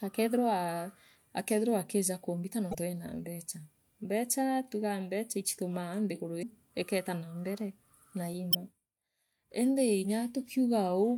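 Damaged data in a compressed stream occurs three times: 2.71 to 2.75 s, 6.39 to 6.43 s and 8.51 to 8.55 s, each lasting about 40 to 45 ms. At each point part of the encoded speech stream is corrupt, so the decoder misreads the affected frames, loses sync and hunts for the next valid frame header. Each event breaks through the speech as a short disturbance, a chirp, squawk, click or short hole, before normal decoding resumes.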